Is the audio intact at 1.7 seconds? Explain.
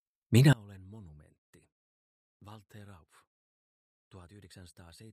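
No. From 0.53 s through to the end of the clip at 5.13 s, one channel inverted is the likely cause: one stereo side appears to have its polarity flipped, so when the two sides are summed to mono, everything they share cancels. At 1.7 s the audio sits about 26 dB lower than before, with the centred, common content largely gone, leaving only a faint residue of whatever differs between the channels.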